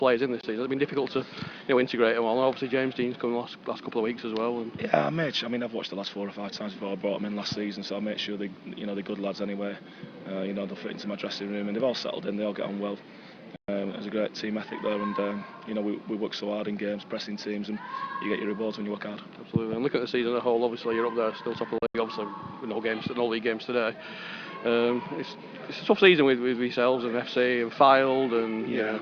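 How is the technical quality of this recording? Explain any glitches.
The recording has three brief gaps where the sound cuts out and picks up again further along. They are most likely Bluetooth dropouts, where wireless audio packets arrived too late to play and the output stayed silent until valid data resumed. From 0.41 to 0.44 s there is a hole of about 20 ms, consistent with a single lost packet. From 13.56 to 13.69 s the gap lasts about 120 ms. From 21.78 to 21.95 s about 120 ms is missing in broken pieces over a 160 ms span, the longest lasting about 80 ms. After each gap the sound comes back already moved on in time, as though it had kept playing through the silence.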